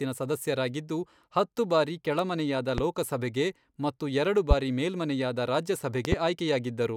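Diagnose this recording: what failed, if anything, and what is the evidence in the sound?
Loud pops at 2.78–2.81 s, 4.51–4.54 s and 6.05–6.15 s, the last a quick double, each roughly 15 to 20 dB above the speech, which continues underneath. Likely an analogue-wiring voltage step, from a plug, switch or static, that later circuits shape into a sharp thump.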